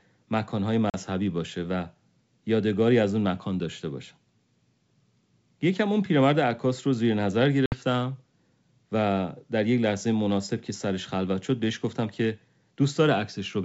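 At 0.90 s and 7.66 s, packet loss on an ADPCM call leaves hard-edged silent gaps of 40 and 60 ms. The speech then returns briefly slightly distorted while the decoder's predictor resynchronises.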